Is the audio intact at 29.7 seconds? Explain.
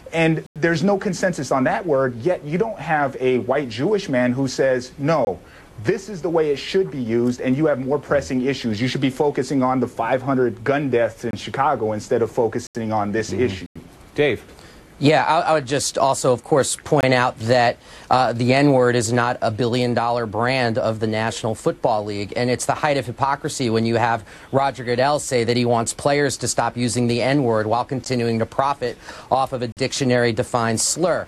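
No: a block of digital silence from 29.72 to 29.77 s, about 46 ms, fits an unfilled 2048-sample buffer; it is a short hole, a flat waveform gap with vertical spectrogram edges.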